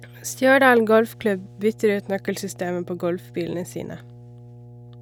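A ground loop or a nearby transformer is coupling the 60 Hz power line into the signal path, producing mains hum that runs from start to finish of this speech clip. The result is a steady, low tone at 60 Hz with some low harmonics above it, sitting roughly 25 dB below the speech.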